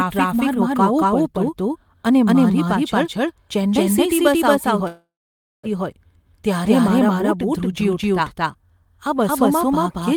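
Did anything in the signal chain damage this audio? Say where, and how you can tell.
Yes. Throughout the speech a doubled audio track runs under the original: a second full-band copy about as loud as the first trails it by roughly a fifth of a second, with no decay or room colouring. That dryness separates it from a real echo or reverb tail. It points to playback or capture, where the sound was likely recorded twice, once through a slower path, and the two copies were mixed out of step.

From 4.87 to 5.66 s there is a call audio freeze at the network and jitter-buffer stage. The last sound is stretched into a fading buzz or hiss that drops into about 0.56 s of silence. After that, speech carries on exactly where it stopped, so nothing is lost and everything after it sits 0.76 s later. That is how it differs from packet loss, which cuts material out. The likely cause is packets held up in transit until the buffer ran dry.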